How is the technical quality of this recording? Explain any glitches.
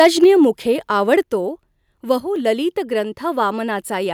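The recording has several level problems: two bursts of clipping, two abrupt drops in input level, and one brief dip where the whole signal falls.

Microphone overload runs from the very start to 0.27 s, pushed about 5 dB past full scale, and recurs from 1.12 to 1.14 s, about 1 dB over. The likely cause is an input volume set too high, so the loudest speech peaks exceed the converter's range and a few percent of samples are flattened. It sounds harsh and crackly. On a waveform the peaks appear as flat-topped plateaus, and a spectrogram shows a smear of added high-frequency energy at those moments.

The microphone volume is stepped down at 0.24 s by about 3 dB, and again at 1.23 s by about 5 dB. Each follows an overload, which points to the call software likely reacting to the clipping by cutting the device's input gain in one step. Voice and background both drop at once, with no fade. The waveform envelope shows a clean downward step, and on a spectrogram every frequency band darkens at the same instant.

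A sudden gain jump appears from 2.20 to 2.36 s, where the level falls about 6 dB and then returns. This is likely a digital gain change applied between adjacent samples without any ramp. Speech and noise floor duck together for that short stretch, and the edges can click. The waveform shows a sharp-edged rectangular dip, and the spectrogram shows a uniformly dimmer band.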